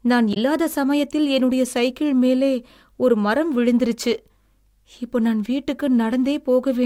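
Right near the start, from about 0.30 to 0.37 s, there's a quick glitch from damaged data in the compressed stream. A stretch of the encoded file got corrupted, so the decoder misread those frames and lost sync before locking onto the next good frame header.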